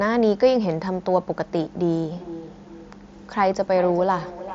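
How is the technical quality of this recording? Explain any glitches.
The recording has one clear glitch, a feedback echo between two devices, in speech carried over a band-limited headset link with nothing above about 7.6 kHz, which fits the mSBC Bluetooth codec. From 2.13 s to the end, the speech returns as repeats spaced roughly 0.4 s apart, reaching about 14 dB below the direct speech. A second device in the same room plays back what this microphone sent, and the microphone picks it up again. Its echo canceller only removes its own playback, so the repeats survive and sound thinner and more ringing than the original.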